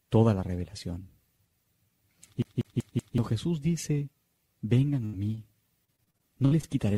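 From 2.42 to 3.18 s the player is caught in a CD stuck on one turn. A scratch keeps knocking the laser back a track at the same point on each rotation, so playback never moves forward. The same 0.19 s slice of sound plays four times, with a brief mute at every jump. The result is a fast, perfectly regular stutter where the audio seems frozen in place until the pickup finally gets past the damage.

At 5.05 to 5.15 s comes a burst of packet loss. A run of about 80 ms of audio failed to reach the receiver in time. The decoder bridged almost all of it by extending the last sound it had and letting that extension fade as the hole went on. Tonal material turns into a held buzz and noisier material into a dying hiss. The sound then picks up again further along, with that stretch simply gone.

Shortly after, between 5.35 and 5.39 s, there is a short concealed packet loss. Only about 20 ms of the stream went missing here. 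The receiver patched it by carrying the preceding sound forward, either following its pitch or as shaped noise, and then crossfaded back into the real signal. What reaches the ear is a brief smear or wobble rather than a clear gap, and any very short sound landing in that window can disappear entirely.

From 5.85 to 6.65 s the connection suffers repeated packet loss, producing robotic sound. Seven separate holes open up over this span, the longest about 58 ms, adding up to roughly 220 ms of missing audio. Each one is filled by extending the previous sound before the next loss arrives, so about a quarter of the stretch is synthetic patching. The sound turns choppy, with fragments dropping out throughout.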